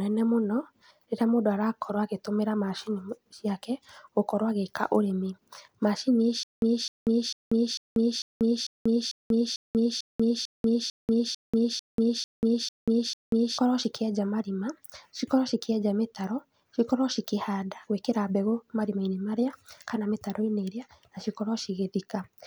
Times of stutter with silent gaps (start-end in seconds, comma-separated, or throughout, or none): 6.43-13.58